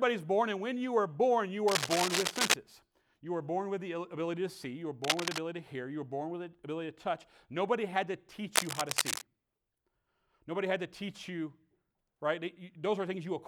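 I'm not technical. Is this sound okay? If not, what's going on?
No. Scratchy, rustling bursts cover the speech from 1.68 to 2.54 s after "you are born you", from 5.04 to 5.38 s before "to hear", and from 8.56 to 9.22 s after "had to". This is cable scratch noise, likely from a worn cable or plug being moved.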